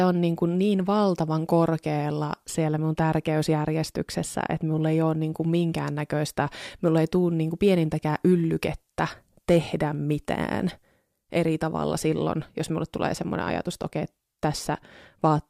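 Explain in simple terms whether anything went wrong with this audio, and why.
Hard clipping hits the speech from 9.50 to 9.57 s. For that moment the sound got louder than the recording chain could carry, so the tops of the waveform were sliced flat. That squaring-off adds a brief harsh crackle to the loudest part.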